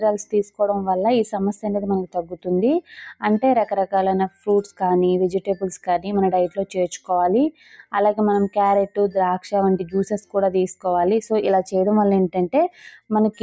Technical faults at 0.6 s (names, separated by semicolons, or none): noise suppressor applied to music or sounds; sound cut by the noise suppressor